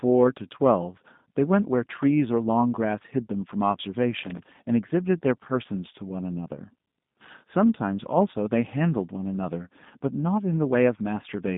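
Speech passed through a G.729 codec, the low-rate VoIP coder that rebuilds each 10 ms frame from a vocal tract filter, a pitch predictor and a few pulses. The damage is plainly audible: the voice sounds rough and synthetic throughout, nothing reaches above 3.8 kHz, and the band sits between 150 Hz and 3.7 kHz, which points to an 8 kbit/s G.729A link. From 4.22 to 4.44 s, a loose connector crackle appears: a worn or dirty contact briefly makes and breaks, chopping the signal into a short, irregular burst of scratchy crackle.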